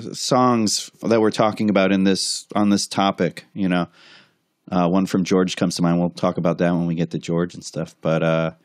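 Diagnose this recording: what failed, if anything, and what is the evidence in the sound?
Nothing failed: no stage from capture to playback leaves an audible fault anywhere in this speech recording.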